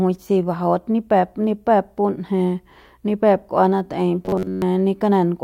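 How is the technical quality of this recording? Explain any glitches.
The recording has one clear glitch, robotic sound from repeated short buffers, between 4.26 and 4.63 s. The speech there collapses into a rigid metallic buzz at 93.8 Hz, roughly following the syllables. The likely cause is late-arriving audio being replaced by repeats of a roughly 10.7 ms segment, with most of the real signal in that stretch skipped.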